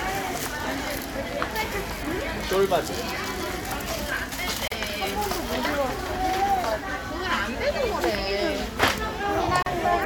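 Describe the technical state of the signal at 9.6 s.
At 9.6 s there is a gap at a join of encoded pieces: from 9.63 to 9.66 s, a gap of about 37 ms cuts into continuous sound. Two separately encoded segments were spliced untrimmed, so the encoder's start delay and final-frame padding sit between them. On a waveform it shows as a flat dropout with smeared edges; on a spectrogram, a thin blank vertical stripe before the sound resumes where it stopped.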